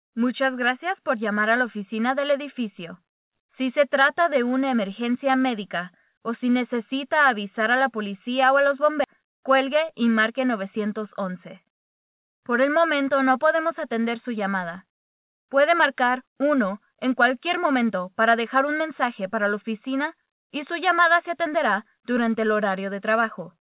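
At 9.04 s there is a skip ahead: about a third of a second of audio was discarded while later packets were already queued, so playback jumps straight across the gap with no fill. The material on either side is spliced almost directly, producing an abrupt discontinuity.

From 9.16 s to 10.98 s a jitter buffer speed-up follows. With too much audio held, the receiver repeatedly cut out short pitch-period segments, shedding around 150 ms in total. The sound runs at 107% speed with unchanged pitch and comes across hurried.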